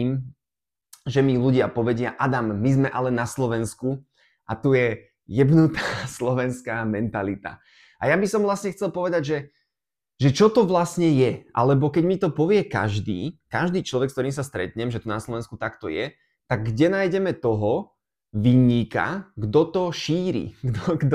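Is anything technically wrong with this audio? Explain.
No, no technical faults here.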